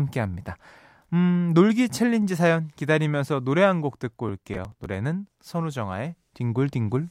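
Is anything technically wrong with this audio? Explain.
Yes. Processor overload crackle runs from 4.29 to 4.86 s of the speech: the processor repeatedly fails to deliver its small buffers, around 5 ms each, on time. Each missed one is simply skipped, leaving about 15 hard-edged gaps that merge into a gritty tearing crackle until the load eases.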